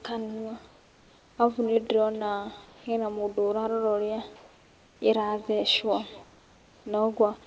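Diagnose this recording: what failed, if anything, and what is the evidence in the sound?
The call-processing stage at the far end has no working echo canceller. The far side is playing this speech on a loudspeaker, its microphone picks it up, and that pickup returns over the network uncancelled. Throughout the clip every phrase is trailed by a fainter, thinner copy about 22 dB down and roughly 0.3 s late. That delay is the acoustic path plus the network round trip.

The pauses between phrases do not carry the real room background. From 0.68 to 1.38 s, 2.66 to 2.86 s, 4.36 to 5.02 s and 6.24 to 6.86 s the background turns into a smooth, featureless hiss about 1 to 4 dB quieter than the surrounding room sound. The likely cause is discontinuous transmission: the sender's voice detector stopped sending audio during silence, and the receiver filled each gap with synthetic comfort noise shaped to a rough estimate of the background.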